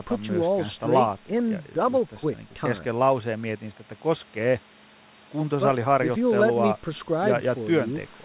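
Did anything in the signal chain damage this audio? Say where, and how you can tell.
No, nothing in the chain damaged this speech; the absence of any content above 4 kHz is just the narrowband call path working as intended, which fits G.711 A-law coding.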